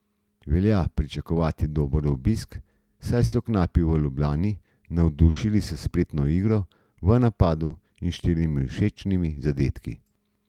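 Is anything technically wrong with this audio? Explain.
Yes. Burst of packet loss at 3.25–3.35 s after "pričakovati dober obisk saj", at 5.30–5.39 s before "s spretno igro v", and at 7.64–7.73 s after "s spretno igro v". Each time, roughly 60–70 ms of the preceding sound is stretched and faded to cover the lost packets, then the speech jumps ahead, about 60 ms missing.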